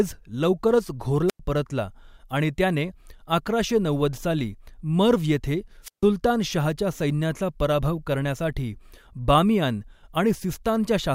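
Speech with two wireless microphone squelch dropouts, at 1.28–1.40 s before "परतला आणि त्याने" and at 5.83–6.05 s after "नव्वद साली मर्व्ह येथे". Each time the fading FM signal brings up hiss, the receiver squelch mutes for about 97 ms and 146 ms, and the audio returns. Unlike a clean digital gap, each dropout begins with this rise of static.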